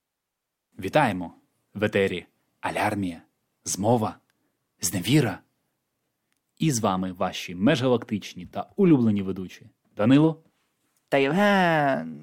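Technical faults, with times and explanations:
No technical faults can be heard in this speech.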